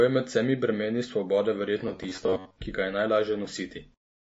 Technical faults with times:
0.00-4.21 MP3 compression
1.88-2.56 robotic sound from repeated short buffers

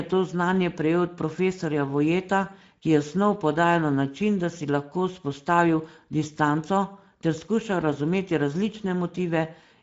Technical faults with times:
0.00-9.83 Speex codec

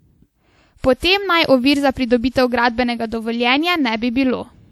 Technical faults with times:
0.00-4.72 low-bitrate audio saved at a high bitrate

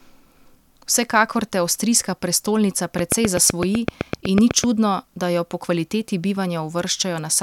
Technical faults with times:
2.99-4.65 train of clicks

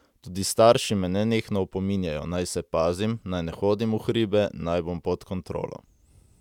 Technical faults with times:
none

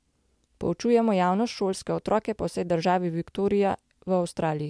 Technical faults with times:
none

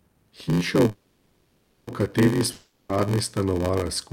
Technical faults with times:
0.00-4.12 block size mismatch (padded)
0.87-1.90 call audio freeze
2.52-2.93 long network dropout

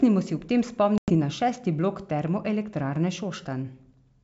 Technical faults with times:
0.98-1.13 packet loss on an ADPCM call

